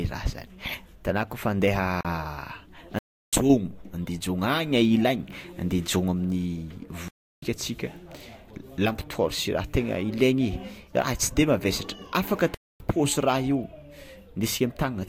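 Speech, interrupted by four blocks of digital silence, where either the output buffer went unfilled in time or a calculation produced invalid numbers. The audio drops out abruptly at 2.01 s (41 ms), 2.99 s and 7.08 s (0.34 s each) and 12.54 s (0.26 s).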